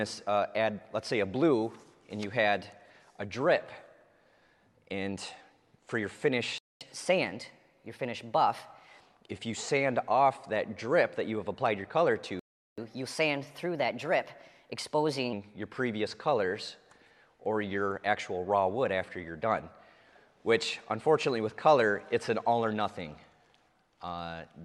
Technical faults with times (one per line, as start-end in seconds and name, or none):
6.58-6.81 playback stall
6.81-9.06 catch-up at higher speed
12.39-12.78 playback stall
12.78-15.33 catch-up at higher speed